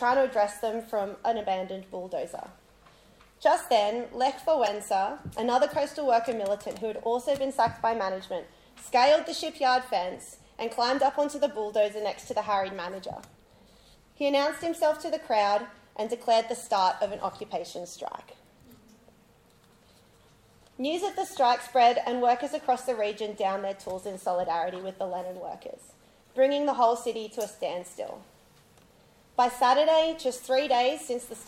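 At 4.66 to 4.68 s a short burst of misplaced energy, peaking around -20 dBFS, marks a corrupt frame decoded. Flipped bits reached the decoder, which played one damaged frame anyway. A fainter blip at 27.23 s, near -35 dBFS, suggests two short damaged frames.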